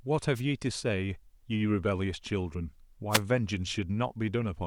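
The wireless microphone's radio signal faded briefly at 0.35 to 0.41 s and again at 3.10 to 3.21 s, letting receiver noise through as short bursts of static over the speech.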